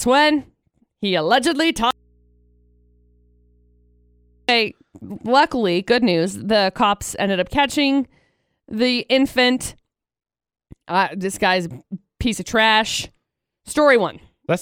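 An audio dropout to a faint residue hits this speech clip from 1.91 to 4.49 s: the signal cuts out abruptly for about 2.6 s, leaving only mains hum roughly 40 dB down, likely from a live but disconnected input path.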